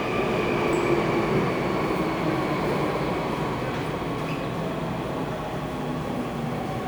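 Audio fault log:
0.73 s and 3.74 s, dropped buffer (overrun): the sound jumps ahead roughly 30 ms with no silent gap, unlike a dropout, likely from unread samples being overwritten.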